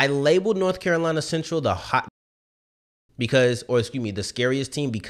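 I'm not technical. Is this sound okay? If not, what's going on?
No. The player likely ran short of audio data or was held up, causing a playback stall. After "the hot", the speech cuts to silence at 2.08 seconds for about one second, then resumes at 3.09 seconds with "because or excuse me".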